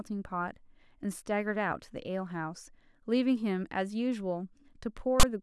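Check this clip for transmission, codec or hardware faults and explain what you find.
One fault, near the end of the speech: file tags played as audio, from 5.20 to 5.23 s. The decoder ran past the end of the sound data into a block of text metadata and treated those character bytes as samples. Because text bytes cluster in a narrow range of values, the result is a loud, harsh rasp pushed off-centre rather than symmetric noise, lasting about 34 ms as a burst of static with abrupt, hard edges.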